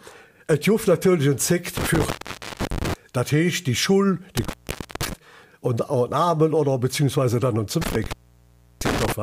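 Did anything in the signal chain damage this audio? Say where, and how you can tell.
Yes, there's an intermittent contact in the analogue wiring. You get three dropouts: one in the stretch from 1.77 to 2.94 s, one from 4.37 to 5.13 s, and one from 7.82 to 9.12 s. The signal is actually gone for about 0.51 s, 0.51 s and 0.68 s respectively, with crackle at each edge and faint hiss while it's open. That's a loose plug or cable briefly losing the connection and then scraping back into contact.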